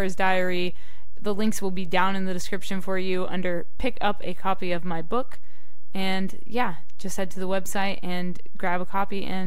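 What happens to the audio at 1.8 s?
DC offset is present at 1.8 s, as it is across the whole clip: the entire speech waveform sits shifted off the zero line by a constant amount, at about -18 dBFS. Because the shift never changes, it carries no audible tone of its own. Instead it eats into headroom, so peaks on one side of the waveform reach full scale sooner, and it appears as a steady spike of energy at 0 Hz, the very bottom of the spectrum.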